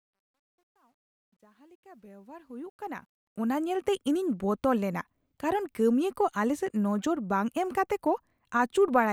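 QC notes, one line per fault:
0.00–3.67 s, truncation distortion on the fade-in: undithered level stage, consistent with about 11-bit resolution, turns quiet waveform into steps; gritty, worst 0.00–2.04 s.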